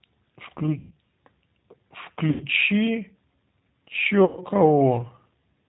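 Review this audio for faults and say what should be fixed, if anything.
The whole call passed through the G.729 codec, which points to an 8 kbit/s G.729A stream that rebuilds speech from a vocal tract model and a few pulses per frame. Nothing above 4 kHz survives, and the speech sounds plainly rough, thin and synthetic throughout. Preventing this means negotiating a wideband codec such as G.722 or Opus instead of G.729.

VoIP packet loss concealed by the speech codec occurs three times: 0.79 to 0.93 s, 2.30 to 2.44 s, and 4.25 to 4.43 s, covering about 120, 100 and 120 ms of missing audio. That pattern fits runs of five or six lost packets. At each gap, the decoder guesses forward from its last pitch and filter while lowering the level. The speech smears into a fading buzzy tone or coloured noise and stays weak briefly after audio resumes. Preventing this means fixing the network path's loss, or adding forward error correction or redundancy and a larger jitter buffer.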